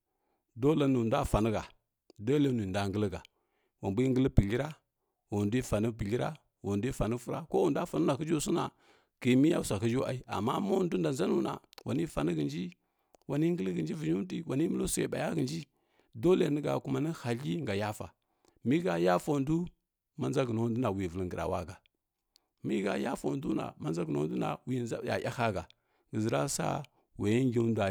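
No technical faults can be heard anywhere in the recording.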